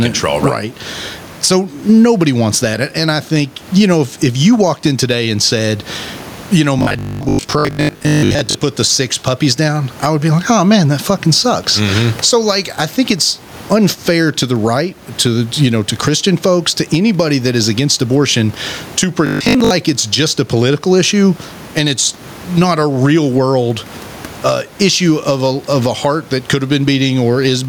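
Gain pumping runs through the whole speech clip: the level rises and falls by about 15 dB, likely because the input gain is set too high and a fast limiter pulls it down on each loud sound before letting it recover. The room noise sits about 32 dB below the speech.

Robotic sound from repeated short buffers appears from 6.79 to 8.57 s, between "you know" and "put the six puppies", and again from 19.27 to 19.71 s, between "is against abortion to" and "it's just a political". Most of the audio in those spans is skipped, likely because new data arrives too seldom and the last 20 ms is replayed instead. That repetition imposes a fixed 50 Hz metallic buzz.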